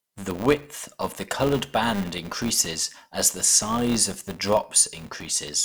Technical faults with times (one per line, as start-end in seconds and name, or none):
0.00-5.65 filter restarted on every block